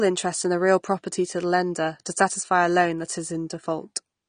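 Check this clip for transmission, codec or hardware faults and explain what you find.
One fault runs through the whole clip. The speech sounds dull and smeared, with a watery, warbling edge on sustained vowels and a fizzy texture on sibilants, and nothing is heard above 9.7 kHz. The likely cause is AAC compression. Short of bits, an AAC-LC encoder pulls its cut-off down and quantises the remaining frequency lines coarsely, leaving spectral gaps that shift from frame to frame. The damage is plainly audible and fits a low bitrate of around 32 kbps.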